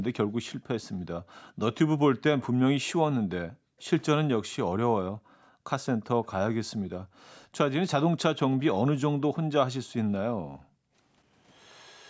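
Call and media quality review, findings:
Echo leak, 0.82–0.88 s and 1.47–1.51 s. Faint delayed copy of the speech, trailing the original by 219 ms, roughly 30 to 35 dB below it, in short scraps. Likely cause: far-end loudspeaker pickup not fully removed by that side's echo canceller, residual returned down the line. Consistent 219 ms delay across both scraps suggests a single fixed acoustic/network return path.

Background gated by the echo canceller, 0.91–1.05 s, 3.5–3.8 s, 5.11–5.66 s, 7.04–7.18 s, 10.42–10.93 s. Room sound ducks by about 40 dB, then recovers. Dips range from brief to around half a second. Canceller suppression clamping the microphone while the loudspeaker plays, releasing on silence.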